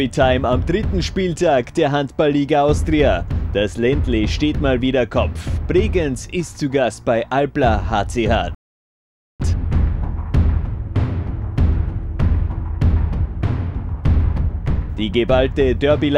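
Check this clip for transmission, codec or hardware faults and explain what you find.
One transmission fault is present, a rebuffering stall. From 8.55 s to 9.40 s the sound halts into silence for about 0.85 s, then carries on from the exact point where it stopped. The playback buffer emptied before the next chunk of audio had downloaded, so the player waited rather than playing on. What separates this from a dropout or packet loss is that no material is skipped. The gap is inserted, lengthening the clip by 850 ms while leaving its content continuous on either side.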